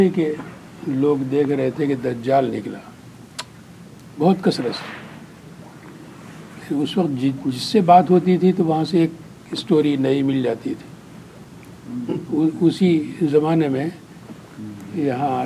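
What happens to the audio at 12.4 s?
Nothing goes wrong at 12.4 s; the audio plays through that moment intact, with no dropout, click, distortion or other fault.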